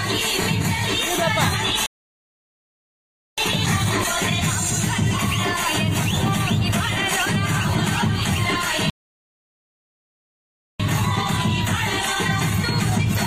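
At 1.86 s the audio just drops out and stays silent for about 1.5 s, picking back up at 3.38 s. It happens again at 8.90 s, this time a longer gap of about 1.9 s before sound returns at 10.80 s. Both read as a playback stall, likely the player starving for data or its thread getting blocked, so the output simply goes dead mid-flow until it recovers.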